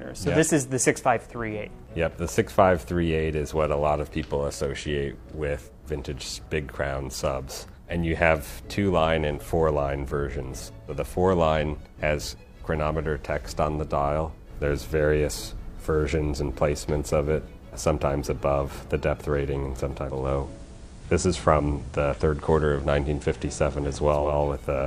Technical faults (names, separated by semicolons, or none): digital radio blending to analogue